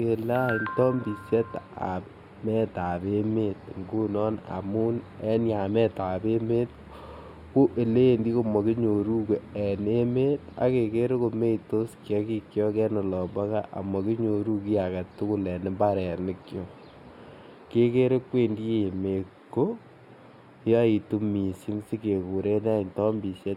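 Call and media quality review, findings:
Channel delay (comb filtering), throughout: speech sounds hollow and phasey in the top end. One channel lags by a few samples before the mono sum, cancelling near 7 kHz and at evenly spaced frequencies above.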